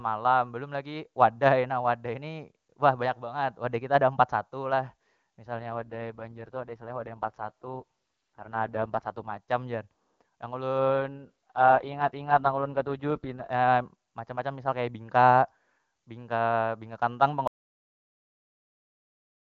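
From 5.58 s to 9.38 s the speech turns rough, buzzy and synthetic, clears, then does the same again from 10.78 s to 13.50 s. Both are AMR rate drops. The network has pushed the AMR-WB encoder down to one of its lowest modes, which fits a fall from 23.85 to 6.6 kbit/s, so that bits go to error protection. Bandwidth holds steady and nothing drops out; only the texture degrades until the rate recovers. Outside these spans, HD Voice at the higher rate is clean.

At 17.47 s the audio has a cut-off end. It stops mid-sound and falls straight to digital silence, with no decay, and stays silent to the end. The final buffers were never written or played out, so the sound is truncated abruptly rather than fading or finishing naturally.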